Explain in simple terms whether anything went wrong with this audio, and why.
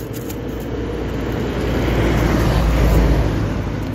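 Nothing went wrong here.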